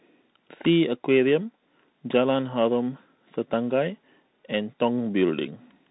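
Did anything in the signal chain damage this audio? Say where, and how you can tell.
Yes: the damage happens at the codec stage, where a Bluetooth CVSD headset codec runs for the whole clip. The speech has nothing above about 3.9 kHz, which fits CVSD's 64 kbps one-bit stream. Each sample only nudges the level up or down with an adaptive step, so loud high-frequency energy outruns the step and distorts, s sounds turn scratchy, and a granular hiss sits under the speech throughout.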